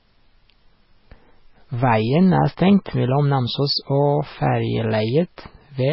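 Throughout the speech, the sound is heavily damaged by what is likely MP3 compression. Nothing remains above about 5.6 kHz, so the treble is cut off cleanly. S sounds come out dull and chirpy. Weak frequency lines flicker on and off between frames. That gives a watery, swirling texture. Attacks smear rather than start crisply. The depth of the damage fits a very low bitrate, around 16 kbps.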